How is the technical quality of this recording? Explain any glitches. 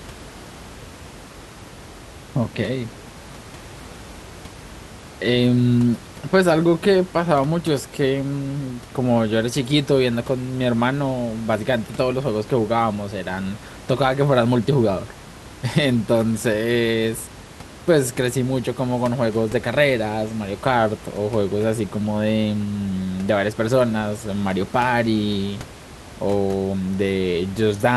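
Nothing here glitches at all; the only thing you'll pick up is a bit of room noise sitting about 19 dB under the speech, which simply belongs to the space the microphone was in.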